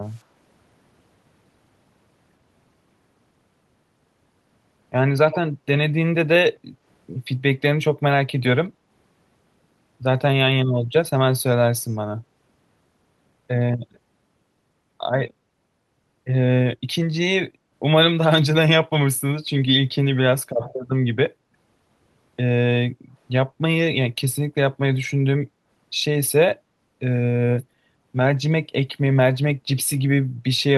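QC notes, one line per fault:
0.10–0.22 s, 5.32–5.37 s, 11.88–11.96 s: echo leak. The far side's echo canceller likely let residual loudspeaker pickup back into the call, so a copy of the speech lagging by 92 ms surfaces in three brief scraps. It is barely audible at 0.10 s and 11.88 s, roughly 40 dB down, but much plainer at 5.32 s, only around 10 dB under the speech.
22.93–23.12 s, 25.50–25.66 s: background gated by the echo canceller. While the loudspeaker played, the canceller clamped the microphone down hard. The room sound dips by about 11 dB for roughly a fifth of a second, then by about 6 dB for about 150 ms, and returns each time once the canceller releases.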